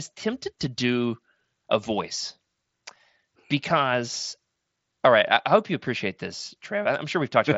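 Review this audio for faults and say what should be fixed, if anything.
Nothing here needs fixing: the speech arrives intact over what sounds like a Bluetooth mSBC headset link, band-limited to about 7.7 kHz with only the faint graininess that codec leaves on louder passages.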